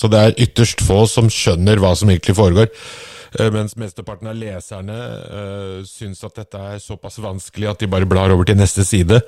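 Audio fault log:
3.30–3.90 s and 7.04–8.22 s, zipper noise: a drop of about 15 dB after "hva som egentlig foregår", then a matching rise, made in unsmoothed 2 dB jumps, roughly fifteen then seven per second. Each jump clicks, so ticking rides the fade, unlike a clean fader move.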